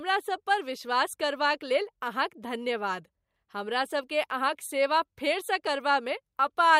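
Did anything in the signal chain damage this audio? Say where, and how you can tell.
No, nothing along the chain left an audible mark on this speech recording, and the signal arrives intact at every stage from capture to playback.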